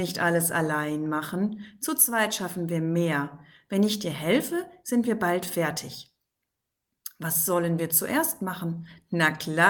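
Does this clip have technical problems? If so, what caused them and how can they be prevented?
No, nothing in this clip stood out as a technical problem on listening.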